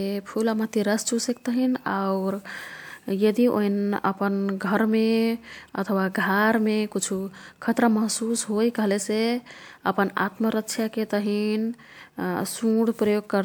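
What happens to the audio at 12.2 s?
Nothing goes wrong at 12.2 s; the speech carries on intact through that moment.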